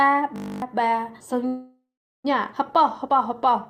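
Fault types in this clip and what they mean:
System hang loop: From 0.36 to 0.62 s the sound turns into a steady, mechanical buzz at 50 Hz, because a single 20 ms slice repeats exactly 13 times. The computer or its audio driver stopped feeding new data while the sound hardware kept replaying the same short stretch of its output buffer. When playback resumes, about a third of a second of the original audio is gone.
Call audio freeze: Between 1.47 and 2.26 s the sound stalls. The last sound is stretched into a fading buzz, and about 400 ms of that stretch is silence. Afterwards the audio resumes exactly where it stopped, so nothing is lost, but everything after it arrives 770 ms late. The likely cause is packets held up in transit, which let the receiver's jitter buffer run empty until they arrived.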